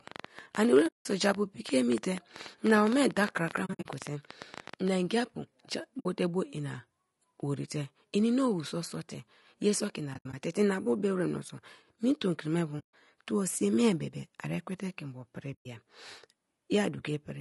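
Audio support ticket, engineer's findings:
Rough, grainy speech through the whole clip, noise filling the gaps between harmonics, top band thin and synthetic-sounding. Likely low-delay AAC compression (AAC-ELD) at a rate that fits 32 kbps. Short frames resolve pitch harmonics poorly, and the low rate leaves too few bits, so damage is plainly audible.

Train of clicks, 0.08 to 4.89 s: irregular ticking and popping, roughly 50 clicks at about 12 per second, peaks roughly 10 dB above the speech, audible in pauses too. Same-shaped pulses, likely interference from nearby equipment or a faulty connection.

AAC frame loss with muting: soft-edged holes. At 0.87 s (180 ms), 3.65 s (140 ms in bursts over 200 ms), 5.99 s (60 ms, just before "te bo ina worite"), 10.13 s (120 ms in bursts over 200 ms, just before "bu be wra meso"), 12.79 s (140 ms), 15.53 s (120 ms, just after "te ke mbo pri"). Lost frames decoded as zero spectrum. 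Overlapping windows fade each gap out and in.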